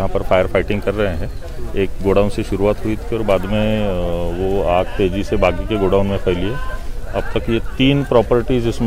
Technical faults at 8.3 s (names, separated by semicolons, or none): none